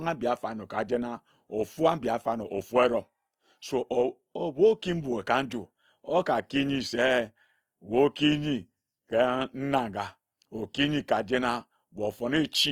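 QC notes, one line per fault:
Throughout, Opus compression: the speech keeps full bandwidth but turns plainly grainy and rough, because band energies are preserved while fine detail is filled with folded or noise-like content. The texture likely comes from Opus music-mode coding, and it fits a rate near 24 kbps.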